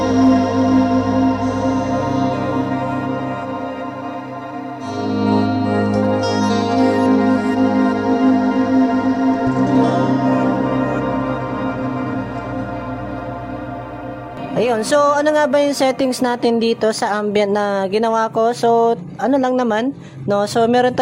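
No technical faults can be heard anywhere in the audio.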